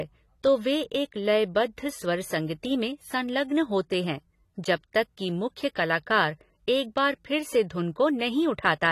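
From start to finish the speech carries plainly audible AAC compression damage, likely from AAC-LC coding at a low bitrate, which fits roughly 32 kbps. Nothing remains above 13.8 kHz, so the top end sounds dull, and coarse spectral quantisation leaves the detail smeared.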